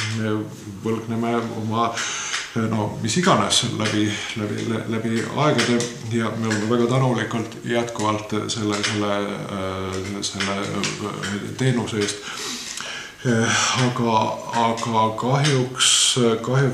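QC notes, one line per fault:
Nothing here caught my ear as a problem, so there's nothing to log for this one.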